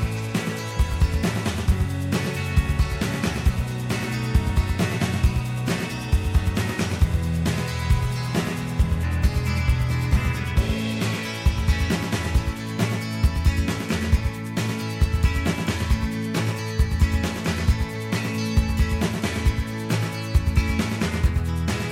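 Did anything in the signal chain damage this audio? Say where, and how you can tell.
Yes. A doubled audio track runs through the whole clip. Every sound repeats about a tenth of a second later, around 5 dB quieter, full-band and dry, with no decay. The likely cause is a second, slower capture path or an edit holding two copies out of step.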